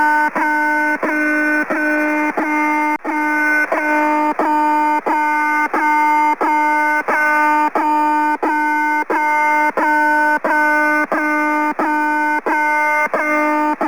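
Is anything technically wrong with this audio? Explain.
Yes. Crude rate conversion runs through the whole clip. Samples were picked by nearest neighbour rather than filtered, and the pattern of dropped samples fits a conversion from 48 kHz to 44.1 kHz. That regular timing error creates tones unrelated to the source, roughly 25 dB below the signal, heard as a gritty, inharmonic fizz. Unlike quantisation noise, which is a steady hiss, this grit rises and falls with loud, bright passages.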